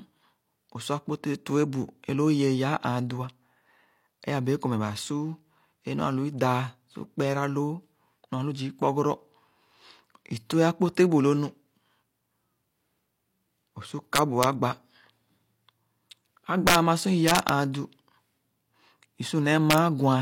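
Violent, sharp cracks break through this speech clip on its loudest moments, at 14.16 to 14.44 s, 16.67 to 16.75 s, 17.28 to 17.49 s and 19.71 to 19.78 s. They are far harsher than ordinary clipping. This is integer overflow: peaks pushed only about 1 to 4 dB past the integer limit, worst near 16.7 s, wrap around to the opposite sign instead of being held at full scale, so each sample jumps across the entire range.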